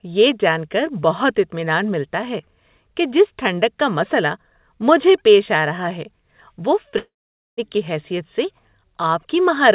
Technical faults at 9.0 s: none

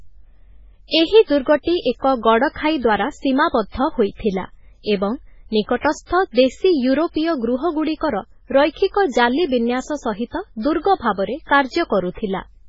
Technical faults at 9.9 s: MP3 compression

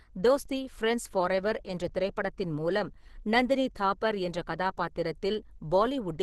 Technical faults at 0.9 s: Opus compression

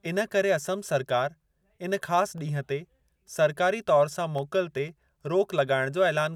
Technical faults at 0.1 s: none

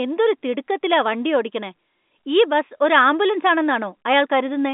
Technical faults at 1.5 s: none

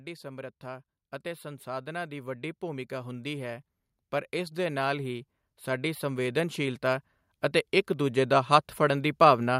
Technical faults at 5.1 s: automatic gain rising

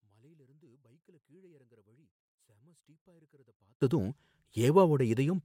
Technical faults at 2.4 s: one channel inverted

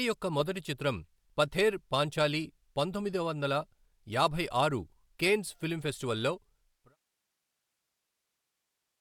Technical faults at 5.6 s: none

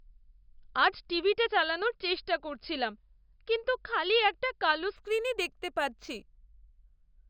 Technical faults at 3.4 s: none

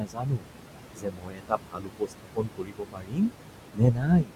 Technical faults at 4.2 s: low bit depth without dither; noise suppressor artifacts; speech cut by the noise suppressor

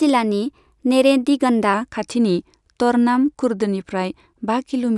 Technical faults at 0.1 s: wrong sample rate

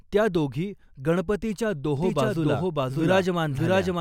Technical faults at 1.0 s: none

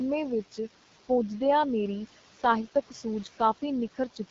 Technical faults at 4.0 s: noise suppressor artifacts; AMR wideband (HD Voice) codec

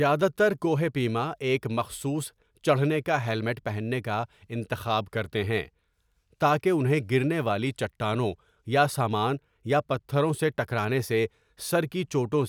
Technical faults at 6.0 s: sample clock jitter

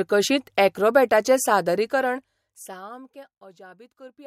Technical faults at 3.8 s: none

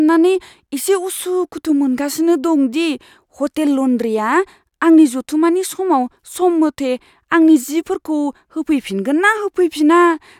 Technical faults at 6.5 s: none

